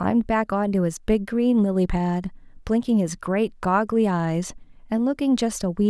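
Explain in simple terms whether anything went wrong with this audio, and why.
Nothing went wrong with this audio, so there is no problem to explain.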